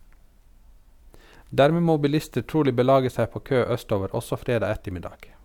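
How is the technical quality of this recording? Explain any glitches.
Nothing in the recording stood out as a technical problem on listening, so there are no glitches to explain.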